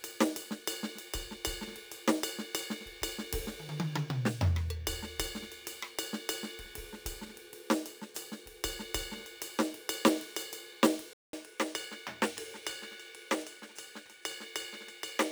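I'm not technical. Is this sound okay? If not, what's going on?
No. Throughout the music there is sample clock jitter: a rough hiss that swells on loud, bright passages and disappears in quiet moments, unlike steady background hiss. At 11.13 s the sound drops out for 0.2 s, then stays duller, a bit quieter and faintly noisier to the end, likely an input switched to a poorer device.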